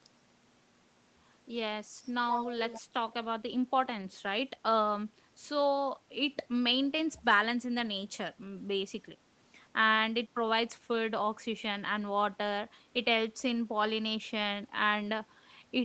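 From 2.69 to 2.82 s, a faint delayed copy of the speech trails about 130 ms behind, roughly 15 dB down. This is likely an echo leak, where a far-end loudspeaker's echo canceller let residue through. At 4.01 to 4.03 s and again at 14.75 to 14.77 s, a single 20 ms frame turns briefly rough and noisy without any gap: a lost packet rebuilt from error correction, with Opus in-band redundancy filling each one at lower quality.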